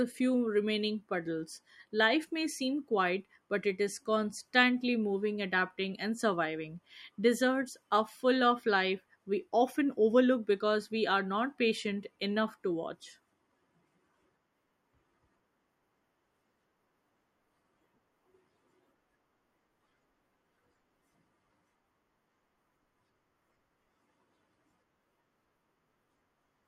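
Nothing stood out as a problem on listening to this recording.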